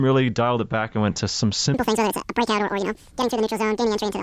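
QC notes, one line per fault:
1.74 s to 4.23 s, wrong sample rate. From 1.74 s to the end, the speech suddenly runs at twice its normal speed and a full octave higher, 12 semitones up. Speed and pitch rise together by the same factor of 2.0. That means the samples are being played back at double their recorded rate with no conversion, which fits 16 kHz audio read out at 32 kHz. The voice sounds squeaky and hurried.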